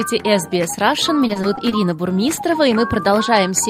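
From 1.27 to 1.73 s there is repeated packet loss, giving a robotic sound. Five short gaps, each up to 20 ms, were patched by extending earlier audio, which makes the sound choppy and robotic.

At 2.35 s there is a short concealed packet loss. About 20 ms went missing and was filled by continuing the previous sound, which leaves a brief smear.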